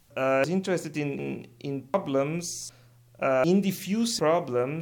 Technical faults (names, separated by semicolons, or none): audio missing between chunks